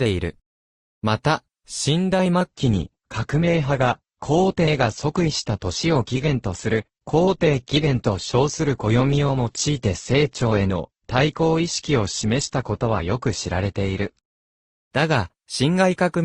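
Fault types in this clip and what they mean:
adaptive stream at a lower bitrate: from 2.5 to 14.5 s, quality drops abruptly without a gap, with nothing above 8.1 kHz, fitting a switch to a low-bitrate Opus stream.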